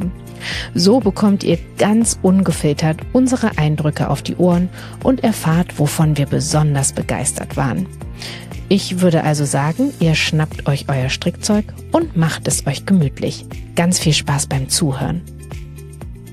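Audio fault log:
Nothing to log here: I listened the whole way and didn't catch a single problem in this audio.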